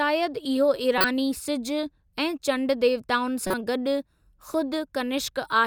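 At 0.98 to 1.04 s, and again at 3.47 to 3.54 s, the speech is broken by a corrupt frame decoded fault. Each lasts about 60 to 70 ms, roughly a couple of codec frames. Flipped bits in the compressed data were decoded as though valid, so misread gains and codes placed energy at frequencies unrelated to the speech. Both events are heard as a short chirpy burst of noise lasting as long as the damaged frames.

At 4.54 s a repeated buffer fault occurs. Fresh audio did not reach the output in time, so the device played the previous buffer a second time. The repeated block is 5 ms long, which points to a small playback buffer, and a few milliseconds of real audio are lost. Because the repeat is so brief and has hard joins at both ends, it is heard as a single click rather than a stutter.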